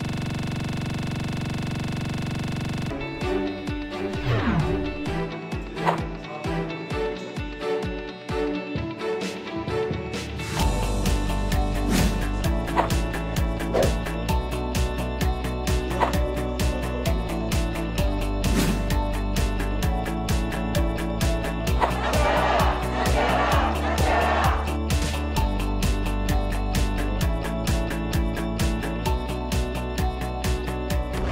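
From the very start until 2.91 s, the audio is caught in a system hang loop: one 42.67 ms slice repeats exactly, dozens of times, giving a rattling buzz at about 23.4 Hz. The loop length fits a 2048-sample ring buffer that the sound hardware kept replaying while the driver or computer froze. Unlike a packet-loss repeat, the fragment is identical on every pass and locked to a rigid period rather than varying.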